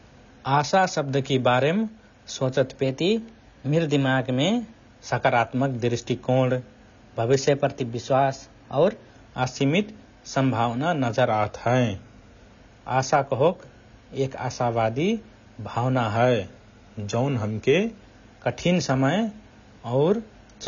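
Throughout, the speech is dulled and smeared by AAC compression, likely at about 24 kbps, with nothing above 6.9 kHz and plainly audible warbling texture. A clock-matching drift correction step likely changes the playback rate abruptly: from 2.83 to 4.85 s and 7.45 to 9.13 s, just before "असिमित सम्भावना", speech runs 6.42% fast and about 108 cents sharp. From 11.28 to 12.53 s and 16.16 to 18.02 s it runs 6.42% slow and about 115 cents flat, then snaps back.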